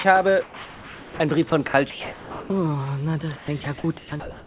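From 0.44 to 1.2 s the real background drops out for comfort noise in place of the background: a flat, featureless hiss about 5 dB quieter, likely from the sender pausing transmission.

From 1.5 to 2.5 s, and again from 3.36 s to the end, the sound is chopped by the voice detector. Bits vanish into synthetic fill, likely from the detector toggling sending on and off.

The band stops at 4 kHz, which fits a narrowband G.711 call path.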